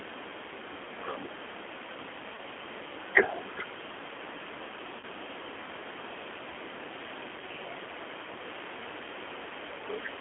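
Throughout the speech, the signal has passed through a G.729 codec, a low-rate coder that discards the waveform and resynthesises each 10 ms frame from a vocal tract filter, a pitch predictor and a few pulses. The roughness heard fits the 8 kbit/s G.729A variant, and the telephone line limits the band to roughly 250 Hz to 3.4 kHz. The coding damage is plainly audible as a thin, slightly synthetic, rasping texture.

At 2.35 s, and again at 5.00 s, VoIP packet loss concealed by the speech codec appears. A packet went missing, and the decoder filled the gap by extrapolating from its last pitch and filter settings. The missing audio points to one 30 ms packet each time. The patch and the decoder's recovery afterwards last about 54 ms in each case. During that time the sound is stretched into a brief, fading smear before normal decoding resumes.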